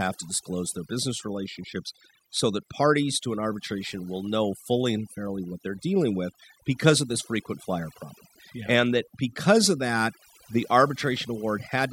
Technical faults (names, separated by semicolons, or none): overdone noise removal